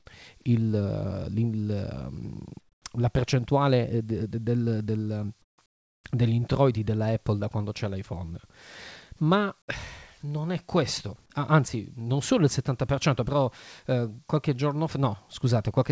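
Speech clip with comfort noise in place of the background at 2.60–2.84, 5.42–5.58 and 5.66–6.04 s: smoother synthetic noise, about 13–24 dB quieter, likely from discontinuous transmission during pauses.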